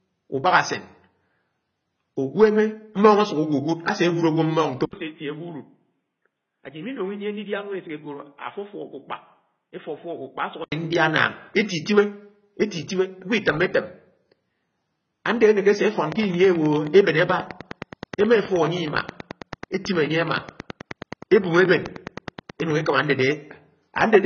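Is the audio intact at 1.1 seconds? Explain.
No. At 1.1 s, as throughout the speech, AAC compression is likely at work: nothing above 6.6 kHz, plus a warbling, fizzy texture from spectral holes or substitute noise that a plain low-pass filter wouldn't leave, which fits roughly 16 kbps AAC-LC.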